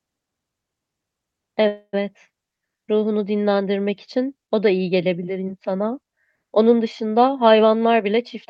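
From 1.67 to 1.95 s there is a call audio freeze: the last sound is stretched into a fading buzz, with about 60 ms of silence, before the audio resumes where it stopped. This points to late packets likely draining the jitter buffer, inserting roughly 0.26 s of delay with nothing lost.

From 7.86 to 8.47 s, a jitter buffer speed-up plays the sound at about 108% speed at unchanged pitch. The receiver trims repeated pitch-period-sized pieces, around 50 ms in total, to shed excess buffered delay, so this stretch sounds rushed. The Opus call path limits the band to 12 kHz.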